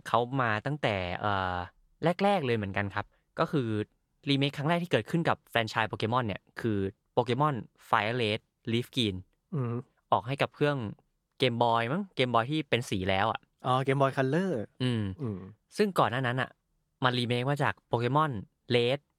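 A speech recording with nothing technically wrong with it, so there are no times or causes to give.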